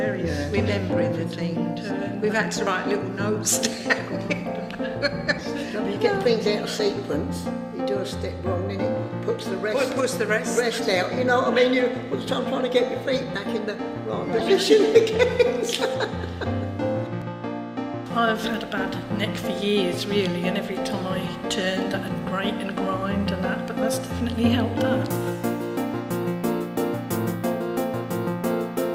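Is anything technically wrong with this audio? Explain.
Yes, two kinds of fault are present.

At 2.67, 3.99 and 17.22 s there are dropped buffers (overruns), likely from the capture side failing to read its samples before the hardware overwrote them. Each lost piece vanishes and the audio on either side is butted together with no gap, so each spot is an abrupt skip forward: about 40 ms at 2.67 s, roughly 70 ms at 3.99 s, and only about 20 ms at 17.22 s.

Corrupt frames were decoded at 5.39 to 5.43 s, 9.38 to 9.41 s, 14.37 to 14.42 s and 26.23 to 26.25 s. Damaged bits in the compressed stream were played as though valid, so misread gains and codes push energy into the wrong frequencies for the span of the bad frames. Each spot is a brief chirp or burst of noise lasting a few tens of milliseconds, with the one at 5.39 s covering the most consecutive frames, about five.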